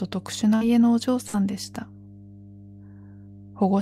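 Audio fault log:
throughout: mains hum. A steady 50 Hz tone with low harmonics sits under the speech, about 20 dB below it. Power-line current is leaking into the signal, probably through a ground loop or a nearby transformer. It never changes, so it stays audible in pauses.
0.55–0.64 s and 1.27–1.37 s: burst of packet loss. Each time, a stretch of audio never arrived. The receiver stretched the last sound for 54 ms and then 68 ms, letting it fade into a buzz or hiss. Speech then resumes about 60 ms further on, skipping what fell between.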